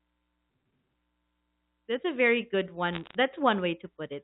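Bit errors on a digital phone line appear from 2.93 to 3.15 s in this speech clip, just after "a very good": a burst of sharp ticks and crackle over speech that is otherwise intact. On the G.711 line, whose narrowband sound with nothing above 4 kHz fits 64 kbps A-law coding, each flipped bit alters a single logarithmically coded sample. Flips landing on the upper bits, or on the sign of a loud sample, throw that sample far off, producing each click, at an error rate of roughly half a percent.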